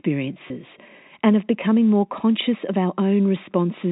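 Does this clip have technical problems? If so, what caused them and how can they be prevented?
Yes. A packet loss with pitch repetition occurs at 0.48 s and runs to about 0.50 s. About 20 ms of speech went missing, which fits a single lost packet. The receiver filled the gap by repeating the last pitch period. Because the gap is short, it does not fade to silence. Instead the speech briefly holds and turns slightly buzzy before normal sound resumes. The G.711 telephone coding underneath adds only its usual narrow band. Preventing this means reducing network loss, or adding a jitter buffer with forward error correction or redundant packets.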